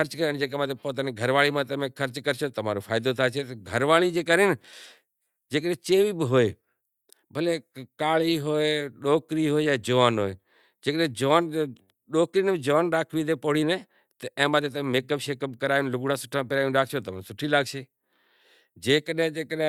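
No dropouts, clicks, distortion or other technical faults can be heard anywhere in the recording.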